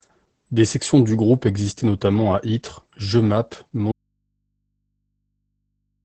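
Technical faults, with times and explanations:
Throughout: Opus voice compression. The speech is band-limited with nothing above about 8.6 kHz, and it sounds muffled and hoarse. That fits SILK-mode wideband coding at a low bitrate, around 12 kbps, where the coarse excitation coding makes the damage plainly audible.
3.92 s to the end: audio dropout to a faint residue. The speech cuts off abruptly and does not return. Only mains hum remains, roughly 55 dB below the speech. The likely cause is that the source signal was lost while the path downstream stayed live.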